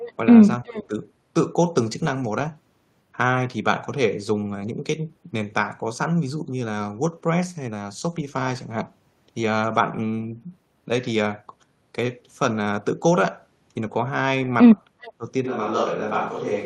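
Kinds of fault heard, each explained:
Echo leak: at 0.0 to 0.12 s, 0.67 to 0.82 s and 15.02 to 15.12 s, a faint delayed copy of the speech comes back, trailing by about 370 ms early on and 390 ms near the end, and sitting roughly 20, 25 and then 30 dB below the direct sound. This is most likely a far end playing the call on a loudspeaker, with its echo canceller failing to remove everything its microphone picked up, so the remnant is sent back.
Speech suppressed in double talk: between 0.64 and 0.95 s, and again at 15.18 to 15.25 s, the speech dips while the other side is talking, with drops of around 15 dB lasting about 200 ms in the first case and about 70 ms in the second. The likely cause is an echo canceller that could not tell its own talker from the loudspeaker echo, and so turned both down together.
Switch to a distant microphone: from 15.46 s to the end, the speech abruptly turns roomy and hollow and loses bass. 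The level stays about the same, but room noise comes up to roughly 25 dB below the speech. This most likely means the close microphone's signal dropped out and the recording fell back on a microphone further away, such as a camera's, which picks up more of the room and less of the talker directly.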